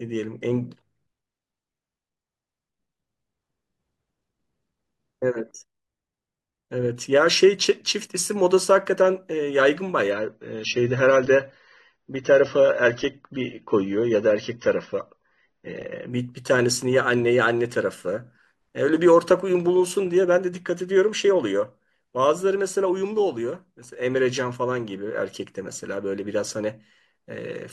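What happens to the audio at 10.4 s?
At 10.4 s the speech suddenly loses its treble, with nothing above about 6.3 kHz, and turns dull with more codec artefacts, with no gap. This is an adaptive stream at a lower bitrate from 10.11 to 16.11 s, consistent with a drop to roughly 24 kbit/s AAC.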